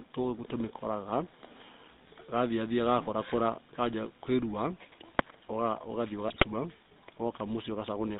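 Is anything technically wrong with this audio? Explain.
Yes, two things. The whole clip has GSM full-rate codec sound, consistent with about 13 kbps: pulse-driven vocal-tract modelling leaves speech buzzy and gravelly, with nothing above 4 kHz. Then from 6.28 to 6.46 s, GSM bit errors corrupt the decoder's filter, pitch and gain values, so the speech briefly squawks, pops and gargles.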